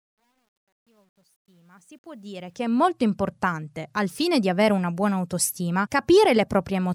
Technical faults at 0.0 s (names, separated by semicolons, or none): truncation distortion on a fade